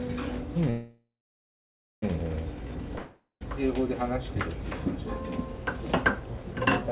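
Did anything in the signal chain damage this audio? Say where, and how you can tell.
Yes, at the network stage of the call, which shows up twice.

A call audio freeze runs from 0.70 to 2.04 s. The last sound is carried on as a fading buzz that settles into silence for about 0.94 s. The sound then resumes exactly where it stopped, with nothing skipped, and everything afterwards plays about 1.32 s later than it should. That points to packets held up in transit, with the jitter buffer running empty and the receiver filling the wait. This is the likely cause.

A long network dropout follows from 2.98 to 3.43 s. Again the last sound is stretched into a decaying buzz, with about 0.12 s of silence at its end. This time the sound comes back further along: roughly 0.42 s of it is simply gone, the same length as the fill. That is the likely signature of packets that never arrived, so the receiver concealed the hole and moved on. 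The band still stops at 4 kHz throughout, as expected of a narrowband G.711-style call path.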